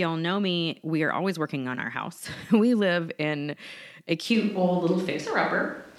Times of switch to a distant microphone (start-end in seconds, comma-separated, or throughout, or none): 4.35-5.98